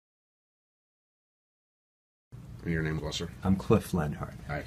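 At 2.97 s a brief burst of damaged data in a compressed stream cuts through the sound. It lasts until about 3.00 s, roughly 22 ms. Part of the encoded stream is corrupt at that point. The decoder cannot read those frames correctly. It loses sync and hunts for the next valid frame header. This is heard as a short chirp, squawk, click or hole.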